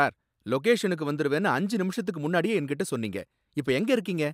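Nothing in the speech stood out as a technical fault on listening.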